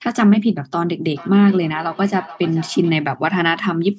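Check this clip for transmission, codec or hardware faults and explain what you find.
There is one fault, a feedback echo between two devices. The call's microphone processing band-limits the speech to 8 kHz.

From 1.15 s to 3.06 s the speech returns at roughly 400 ms intervals, peaking about 21 dB below the direct speech. A second device in the room plays back the call, and this microphone picks that sound up again. The local echo canceller only removes its own device's output, so the returns get through and come back thin and ringing.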